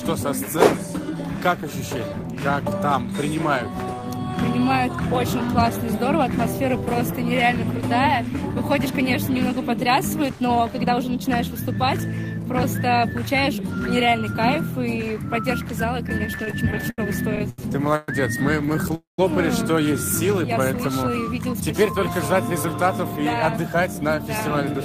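From 16.09 to 18.91 s, repeated stalls (stutter): the jitter buffer ran dry 20 times, each gap bridged by continuing the last sound, longest 118 ms, leaving the audio dragging and jerky.

From 18.95 to 19.20 s, a call audio freeze: a fading continuation of the last sound falls into about 150 ms of silence, adding 232 ms of delay, likely from held-up packets.

From 20.47 to 21.23 s, a jitter buffer slow-down: repeated pitch periods stretch the audio to 96% speed, adding 38 ms at unchanged pitch, with drawn-out sounds.

From 22.92 to 24.82 s, a jitter buffer speed-up: short pitch-period pieces are cut to drain excess buffering, removing about 150 ms, so the audio runs hurried at 108% speed.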